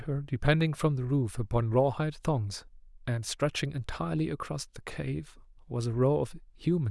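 No technical faults can be heard anywhere in the recording; the signal stays continuous and stable throughout.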